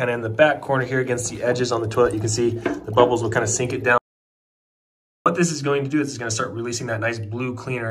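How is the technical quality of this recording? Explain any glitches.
The recording has one clear glitch: an audio dropout to silence from 3.98 s to 5.26 s. The sound cuts off abruptly and returns just as suddenly, leaving a gap of about 1.28 s. That gap is silent, with no room tone or background noise. The likely cause is a brief loss of the input signal, such as a disconnected device or a failed link, while recording continued and wrote silence. Whatever sound occurred during that time is lost.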